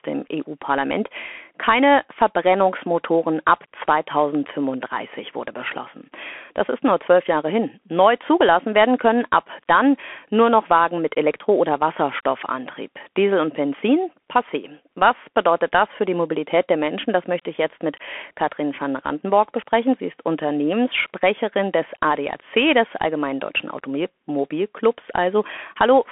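From start to finish, the speech passes through a Bluetooth CVSD headset codec. The band runs from 250 Hz to 3.4 kHz, and nothing reaches above 3.8 kHz. The codec sends one bit per sample, marking only up or down, with a step size that adapts. The sound fits a 64 kbps headset link. The damage is plainly audible. Loud high sounds outrun the step and distort. S sounds turn scratchy. A granular hiss sits under the speech.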